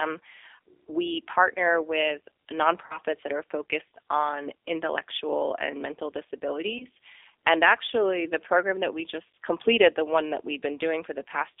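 Throughout the clip the speech has passed through a G.729 codec. The sound points to an 8 kbit/s coder that rebuilds each 10 ms frame from a vocal-tract filter, a pitch predictor and a few pulses instead of the actual waveform. The line is held to roughly 300 Hz to 3.6 kHz, so the audio is thin and muffled, and the coding damage is plainly audible as a rough, slightly synthetic texture.

From 2.86 to 2.99 s, VoIP packet loss concealed by the speech codec occurs. About 40 ms of audio never arrived, which fits two lost 20 ms packets. The decoder extrapolated from its last pitch and filter state with falling gain, so the sound smears into a fading buzzy tone or coloured noise. Because each frame builds on the previous one, the speech stays weakened and distorted until 2.99 s, well after the gap itself.

At 6.78 to 6.86 s, a shorter loss of about 20 ms, consistent with a single packet, is concealed the same way. 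The brief smear and the recovery are correspondingly shorter.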